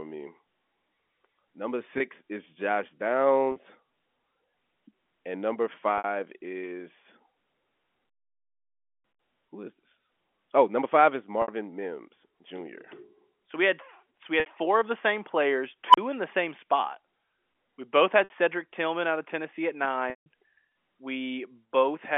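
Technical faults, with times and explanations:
1.98, 3.52, 5.98, 11.42 (after "number five is"), 14.4 (after "we had so we", before "four of the same") and 18.24 s, packet loss with pitch repetition: gaps of 20, 40 and then 60 ms are bridged by repeating the last pitch period, so each sounds like a brief held, buzzy note. The 20 ms steps fit 20 ms packets.
20.10–20.26 s, packet loss with pitch repetition: this 160 ms loss is too long for a repeated pitch period to cover. The held buzz fades out over about 50 ms into silence, and the speech then returns through a short cross-fade.
15.88–15.98 s, unstable filter, after "of the same players" and before "in the same spot": a recursive filter with bad coefficients feeds its output back so that it grows without limit. A tone near 1 kHz swells over about 56 ms into a loud, clipped squeal, then overflows and cuts to roughly 35 ms of silence until the filter resets.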